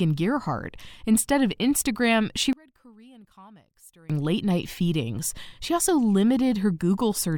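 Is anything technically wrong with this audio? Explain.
Yes. From 2.53 to 4.10 s, just before "late night feedings", the speech suddenly collapses to a faint trace, dropping by about 28 dB before returning at full strength. The likely cause is one channel inverted: with one stereo side's polarity flipped, the centred voice present equally in both sides cancels when they are summed to mono, leaving only the small difference between channels as a residue.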